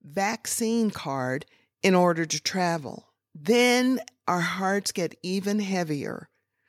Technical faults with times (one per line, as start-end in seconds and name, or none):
0.05-1.46 automatic gain rising